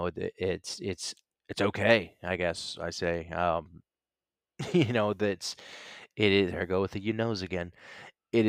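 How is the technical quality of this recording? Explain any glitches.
No glitches or technical faults can be heard anywhere in the recording, so there is nothing to explain.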